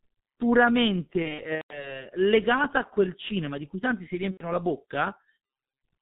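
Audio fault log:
throughout: G.723.1 codec. The speech is muffled and hoarse, with blurred consonants and nothing above 4 kHz. The heavy damage fits its 6.3 kbit/s mode. Its 30 ms frames and slowly updated voice model smear fast changes.
1.22–2.00 s and 4.31–4.46 s: VoIP packet loss concealed by the speech codec. Before "legata a quel cinema", 240 ms is lost across 480 ms, with the longest gap 150 ms. After "di cui tanti si", 90 ms drops. The decoder repeats its last sound as a buzzy tone or coloured noise that fades.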